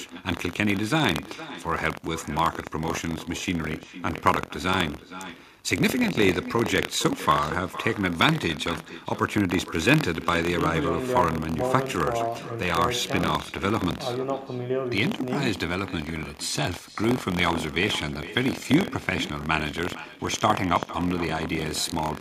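The writing program and the hardware reading the ring buffer have slipped out of step, so each period holds a small slice of stale audio, around 70 ms old, spliced in with hard joins. That buffer tearing runs throughout as a robotic buzz at 43.1 Hz, which fits a 1024-sample buffer, present whenever the speech is.

Also throughout, the far end's loudspeaker is feeding its microphone with no echo canceller removing it, so the speech returns after the round trip. The echo with no canceller trails every phrase by roughly half a second, about 14 dB down, thinner than the original.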